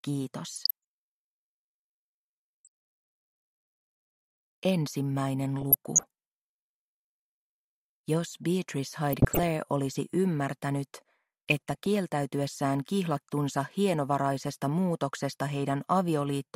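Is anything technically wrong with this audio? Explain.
Yes. DAB burbling at 0.54–0.71, 2.64–2.67, 5.61–6.03, 9.13–9.47 and 11.50–11.86 s: uncorrected bit errors corrupt sub-band samples, producing short blips of noise in single sub-bands.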